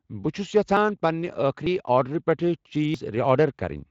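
At 0.77 s and 1.66 s the speech jumps ahead by a few tens of milliseconds, and at 2.94 s it skips roughly a tenth of a second. This is likely a dropped buffer (overrun), with samples overwritten before being read. Unlike a dropout, no gap of silence separates the joined edges.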